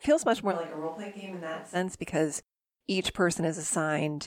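Speech, with a switch to a distant microphone from 0.53 to 1.74 s, between "feels much more" and "because each". The sound abruptly turns roomy and bass-light, drops about 10 dB, and picks up room noise about 25 dB below the speech, likely from the close microphone dropping out.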